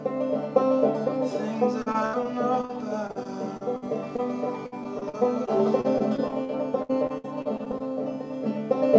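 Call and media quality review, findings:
Choppy, robotic music with chunks missing at 1.82–2.71 s, 3.07–4.20 s and 4.66–7.82 s. Repeated packet loss on the network/jitter buffer side. Each hole is concealed by extending the last sound, with holes up to 70 ms, 54 ms and 65 ms, and the next one follows quickly. Roughly a sixth to a quarter of each stretch is patched. The band stops at 8 kHz throughout, consistent with G.722 at 64 kbps.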